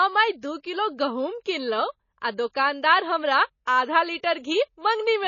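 Throughout, the speech sounds watery and swirly with nothing above 7 kHz, likely MP3 compression at a very low bitrate, around 24 kbps, discarding treble and weak detail. At 0.41 s and from 3.65 to 3.67 s, a brief hiss smears ahead of attacks. This is pre-echo: codec noise spreads into the quiet instant before each onset.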